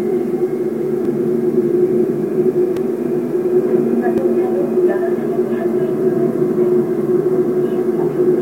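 Three brief ticks break the sound at 1.05 s, 2.77 s and 4.18 s, each a dropout so short that it registers as a click rather than a hole. These are blocks of digital silence, lasting about 2.3 ms, 2.9 ms and 1.5 ms, where the output dropped out and returned with no fade. The abrupt edges produce the clicks. The second and third gaps fit 128-sample and 64-sample blocks, pointing to output buffers that weren't filled in time.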